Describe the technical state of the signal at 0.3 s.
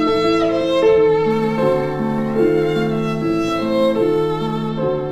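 At 0.3 s the signal is intact, with no audible technical fault.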